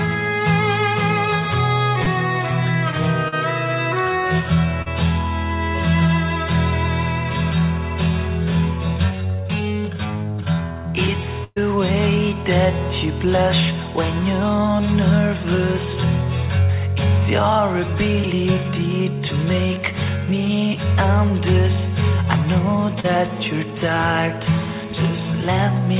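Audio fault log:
2.04, 3.28, 4.82 and 23.00 s: short concealed packet loss. Each is a brief smear or wobble of 20 to 40 ms, where the sound seems stretched for a moment and then blends back. Audio packets arrived too late for the decoder, which filled each hole by continuing the last sound.
11.44 to 11.58 s: burst of packet loss. A held buzz or fading hiss of about 120 ms, ending in a short silence before the sound resumes further on. Several packets in a row were lost, so the receiver continued the last sound while turning it down, and that stretch of audio is missing.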